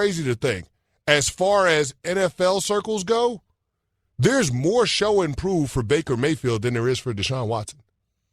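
Nothing here calls for comment: the speech runs along without any audible glitch, dropout or disturbance at any point.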